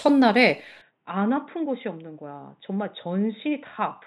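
Speech, and at 0.82 s the sound abruptly narrows and drops about 10 dB, with no gap, staying that way to the end. Nothing remains above 3.8 kHz, and a new faint noise floor appears well below the signal, likely an input switched to a poorer device.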